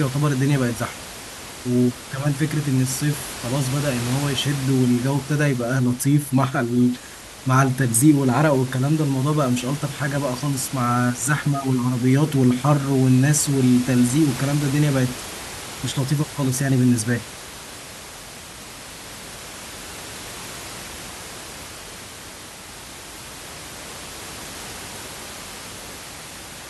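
No technical faults can be heard anywhere in the recording.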